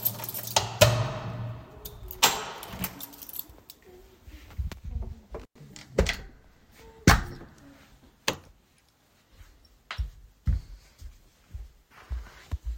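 At 5.40 s an intermittent contact, a loose cable or plug connection, briefly separates and then reseats by 5.58 s. The signal path is fully open for roughly 103 ms of that span. The sound drops out abruptly, with crackle marking the moments the contact breaks and remakes. During the gap faint hiss remains before the sound snaps back in.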